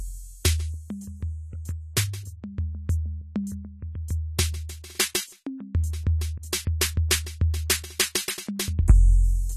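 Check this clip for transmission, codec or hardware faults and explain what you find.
The music carries one fault, present for the whole clip: AAC compression damage. It is plainly audible. Nothing sounds above about 14.1 kHz, so the top end is dull. The likely cause is AAC-LC coding at a low bitrate, which fits roughly 32 kbps. At that rate the encoder spends bits only where the ear is most sensitive. It drops the highest band and thins the rest. Sustained tones take on a smeared, warbling, fizzy texture.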